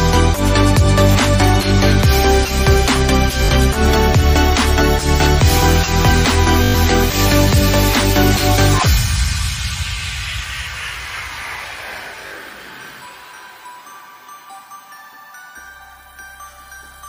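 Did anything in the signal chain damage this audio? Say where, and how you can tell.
Yes, over the Bluetooth link: Bluetooth stutter at 1.13–1.15, 3.45–3.49, 6.64–6.75 and 12.27–12.31 s. Late or lost packets made the receiver replay its last short slice as a buzz, about 100 ms at 6.64 s, before resuming further along.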